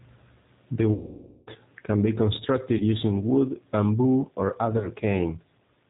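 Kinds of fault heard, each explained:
G.729 codec: Speech sounds slightly rough, synthetic and dull, with nothing above 4 kHz, because an 8 kbit/s codec rebuilds it from a vocal-tract filter, pitch predictor and pulses.
VoIP packet loss concealed by the speech codec: A stretched, fading sound runs about 0.5 s before "can be", with brief glitches near 2.8 and 4.8 s, as the decoder extrapolates its last pitch and filter over missing packets.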